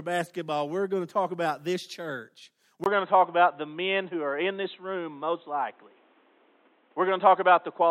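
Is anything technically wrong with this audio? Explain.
Yes. At 2.84 s, right after "talk about this church", the input switched to a poorer device, and it stays that way to the end of the clip. The likely cause is the recording system changing its capture source, perhaps to another microphone or a headset call profile. A gap of about 20 ms marks the switch. Afterward the speech loses everything above 4 kHz and sounds dull and boxy, the level shifts by a few dB, and a new noise floor sits roughly 40 dB below the voice.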